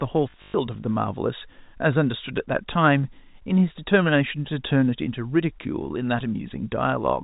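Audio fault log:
0.30 to 0.54 s, packet loss with last packet repeated: 160 ms of audio was lost across 240 ms, longest run 120 ms, and the receiver replayed its last packet. The repeats ignore the pitch, and a 50 Hz buzz points to 20 ms packets.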